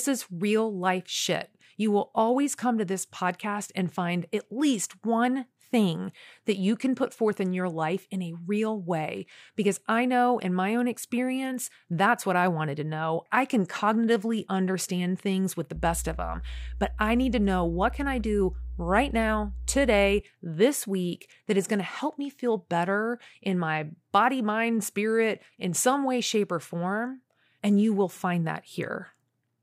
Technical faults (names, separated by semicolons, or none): mains hum